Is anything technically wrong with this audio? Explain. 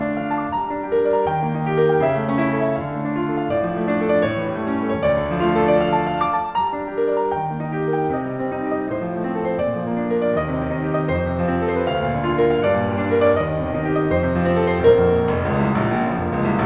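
No, nothing is technically wrong: the music comes through a G.711 mu-law call path at 64 kbps, as expected, with no content above about 4 kHz, which is simply how that narrowband telephone codec carries sound.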